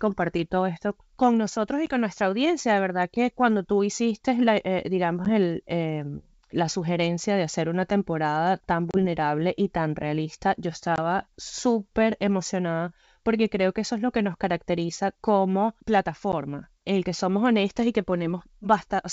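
Packet loss on an ADPCM call at 1.86–1.89, 5.25–5.29, 8.91–8.97, 10.96–10.99 and 16.32 s: hard silent holes, then slightly distorted speech while the decoder's adaptive predictor resynchronises.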